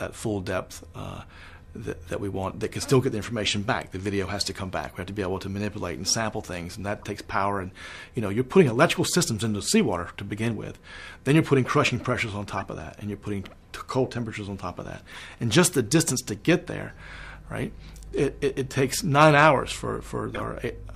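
At 6.99 to 7.04 s, 12.56 to 12.59 s, 15.12 to 15.22 s, 16.67 s and 20.34 to 20.41 s you get short chirpy blips. Each is a corrupt frame decoded: flipped bits in a compressed frame, played anyway, throwing energy onto the wrong frequencies for two or three frames. The one at 16.67 s is faint, around -45 dBFS. The last is the loudest at about -20 dBFS.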